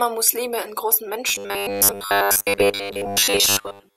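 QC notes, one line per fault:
1.29 to 3.97 s, robotic sound from repeated short buffers: the speech hardens into a rigid metallic buzz fixed at 100 Hz that only loosely follows the words. Likely cause: audio arriving too seldom, so playback loops a 10 ms slice and skips most of the real signal.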